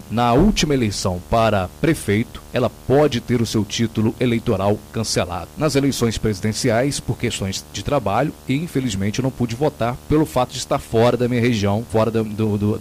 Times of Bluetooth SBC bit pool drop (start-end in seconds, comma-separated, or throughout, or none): none